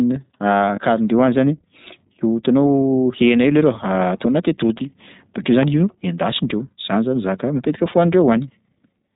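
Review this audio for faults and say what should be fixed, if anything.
The speech runs through the iLBC codec throughout, with audible roughness and a synthetic edge. On a spectrogram, everything above 4 kHz is empty, which fits iLBC's 20 ms, 15.2 kbps mode.

There are lost iLBC frames at 0.76–0.78 s and 4.78–4.82 s, roughly one 20 ms frame each. The decoder repeats the last pitch cycle with added noise, producing a brief buzzy hold. This shows as smeared harmonics in the spectrogram, and clean speech resumes immediately afterward.

A loud pop sits at 5.63–5.65 s, about 10 dB above the speech. It appears as a single tall spike in the waveform and a vertical broadband stripe in the spectrogram. The likely cause is an electrical transient from a plug, a switch or a driver glitch.

To prevent these, use a wideband codec with forward error correction over a more reliable network path, and secure connectors and drivers before recording.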